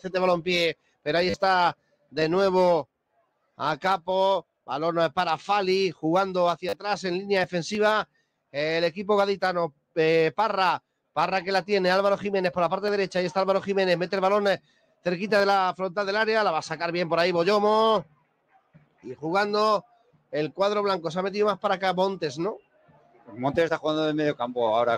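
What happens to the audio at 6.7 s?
At 6.69 to 6.73 s there is a repeated buffer. The newest audio arrived late, so the playback device replayed its last short block four extra times. The repeating unit fits a 10 ms buffer, and the loop lasts about 40 ms. Because each pass restarts with a hard join, it comes across as a brief buzz near 100 Hz rather than a stutter. A dropout would leave a gap of silence; here the same fragment sounds again instead.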